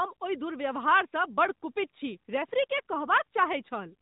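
No technical faults are audible.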